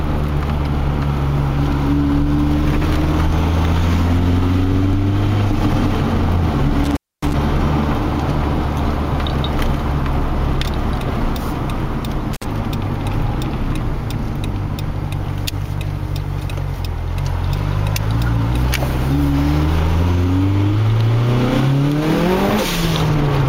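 Intermittent contact occurs at 6.84 to 7.34 s and again at 12.33 to 12.45 s. A loose plug or cable connection briefly breaks the signal path, so the audio drops out abruptly, with crackle where the contact scrapes open and closed. During the gap faint hiss remains. The first break holds open for about 260 ms. The second is a shorter 53 ms stutter.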